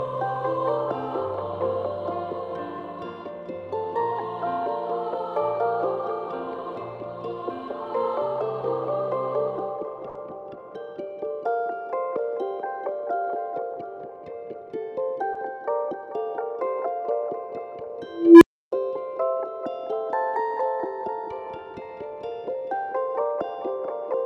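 At 10.09 to 10.17 s, a burst of packet loss left the receiver extending the last sound for 60 ms as it faded, then resuming with another 60 ms skipped. At 15.33 to 15.37 s, short concealed packet loss: 20 ms arrived too late, and the patched continuation leaves a brief smear before the real audio blends back. From 18.09 to 18.72 s, an unstable filter ran away, so a tone around 300 Hz swells over roughly 0.32 s into a loud squeal, then drops to 0.31 s of silence.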